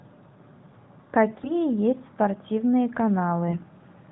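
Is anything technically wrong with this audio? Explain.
Yes. Between 1.38 and 1.53 s, and again between 3.48 and 3.64 s, the speech is hit by AMR bit errors. On a weak link, bits in the AMR-NB stream (about 7 and 5 percent of them) arrived flipped while the checksum still passed. The decoder placed excitation pulses wrongly and skewed fine pitch, gain and spectral values. Pitch and loudness roughly hold, but the sound turns briefly hoarse, scratchy and gargly. Around these bursts, the narrowband codec path is audible as nothing above 4 kHz and only light coding roughness, which fits its 12.2 kbps mode.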